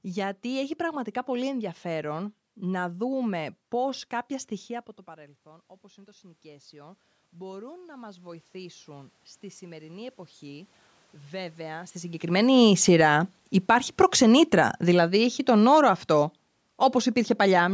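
A speech recording with two automatic gain control faults, both set off by the talker's distance to the microphone changing. Just after "να δούμε πώς κάποια", around 4.5 s, the voice drops by about 21 dB as the talker moves back. From 4.49 s to 14.79 s the automatic gain rises slowly, by about 12 dB, so the voice and the room noise swell back up together. On the waveform the envelope shrinks sharply and then creeps upward over ten seconds. On a spectrogram the background band brightens along with the speech, all of it capped at 8 kHz by the call's microphone processing. Around 12 s the talker comes closer again, and the gain, still set high, lets the speech come in too loud. From 12.31 s to 17.69 s the automatic gain falls by about 9 dB, pulling voice and noise down together. The waveform shows tall peaks that shrink toward the end, and the spectrogram dims evenly across every frequency.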